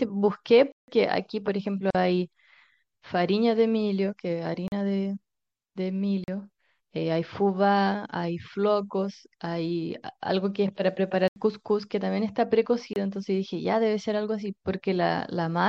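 Throughout the speech the treble is plainly dulled and watery, with swirling, chirpy sibilants and smeared consonant attacks. The likely cause is MP3 compression at a low bitrate, around 64 kbps. On a spectrogram the top band ends at a flat ceiling, and isolated blobs of energy flicker on and off beneath it.

At 0.72 to 0.88 s a block of digital silence cuts the sound for 160 ms. Most likely the output buffer was not filled in time, so samples were zeroed. The result is a hole with hard edges. The waveform drops to a near-flat line, and the spectrogram shows a blank vertical strip edged by thin broadband lines.

At 1.90 to 1.95 s a 42 ms gap at a join of encoded pieces opens, because separately encoded segments were spliced without trimming the encoder's start delay and end padding. Speech stops briefly and resumes where it left off. The spectrogram shows a near-empty strip with slightly blurred edges rather than razor-sharp ones.

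Further blocks of digital silence follow at 4.68 to 4.72 s and 6.24 to 6.28 s, each 40 ms, then at 11.28 to 11.36 s (80 ms) and 12.93 to 12.96 s (26 ms). They sound like short holes, the longest like a clipped dropout, each a near-flat line in the waveform.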